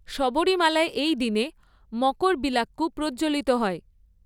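Nothing in the speech stood out as a technical fault on listening.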